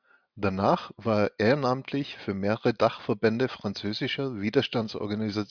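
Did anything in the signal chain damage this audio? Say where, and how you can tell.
No, nothing in this speech recording stood out on listening as a sign of damage at any stage of the signal chain.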